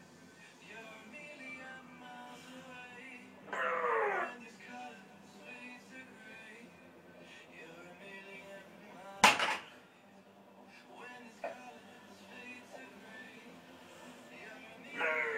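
At 5.89 s the sound jumps forward by roughly 10 ms with no gap of silence between the two sides. This is likely a dropped buffer (overrun): the samples weren't read out before the hardware overwrote them, so the lost stretch vanished and the neighbouring audio was spliced end to end. On a waveform the trace breaks abruptly at that point. A spectrogram shows a thin vertical broadband line.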